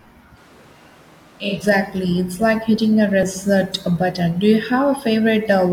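From about 0.38 s to 1.56 s the voice suddenly goes roomy and hollow, thinner in the low end and roughly 5 dB quieter, with background noise sitting around 25 dB below the speech. That's the signature of a switch to a distant microphone, likely because the close mic's feed dropped out and a farther one, something like a camera mic, got used. The change back at 1.56 s is just as abrupt.

At 3.23 s there's a tiny jump in the sound, no gap of silence, just a seam. That points to a dropped buffer (overrun), where the software likely didn't fetch its samples before the hardware overwrote them. Only a few milliseconds went missing, so the two sides were butted together and the speech skips forward very slightly.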